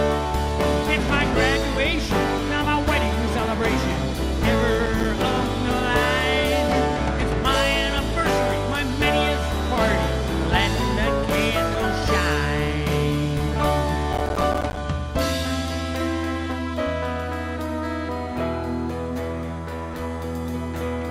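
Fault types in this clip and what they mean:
Processor overload crackle: the processor couldn't finish its tiny audio buffers on time, so each missed deadline drops a short slice of silence with hard edges into the sound. Here it happens twice: a brief gritty burst from 4.75 to 5.05 s with only a handful of misses, then a longer, rougher tear from 14.13 to 14.77 s. The spacing of the clicks suggests buffers of around 5 ms.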